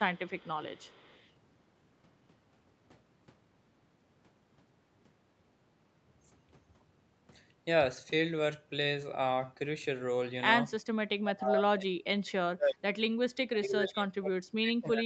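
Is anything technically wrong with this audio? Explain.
Yes, two kinds of fault are audible.

Echo leak, from 0.15 to 0.49 s and from 0.75 to 1.31 s: a very faint copy of the speech trails the original by 323 ms. The likely cause is a far-end loudspeaker echo that its echo canceller failed to fully remove, so it was sent back into the call.

Speech suppressed in double talk, from 11.21 to 12.87 s and from 13.5 s to the end: the voice drops sharply in level, by roughly 30 to 35 dB at its deepest. In the first stretch this adds up to about a second and a half of affected speech. The likely cause is an echo canceller that could not separate the local talker from the loudspeaker echo while both sides spoke at once, and so suppressed both.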